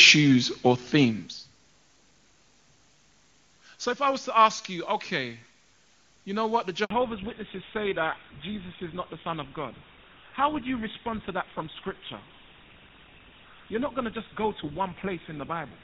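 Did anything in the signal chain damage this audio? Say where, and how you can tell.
Yes. The damage comes from the network stage of a phone call. At 6.84 s the speech cuts out for a handover gap of 60 ms, ending at 6.90 s. The sound drops away fast instead of fading. That points to the call moving between networks while no speech frames arrived. Whatever was said in that 60 ms is gone. Nothing fills the hole, so it is heard as a brief dropout.

The second fault is a fallback to narrowband at the codec stage. It starts right after the gap, at 6.90 s, and lasts to the end. Up to 6.84 s the speech has HD Voice clarity, which fits AMR-WB at a high rate such as 23.85 kbit/s. After the switch, nothing is left above 4 kHz. The speech turns dull and rougher. That fits the new link using an older narrowband codec such as GSM full rate.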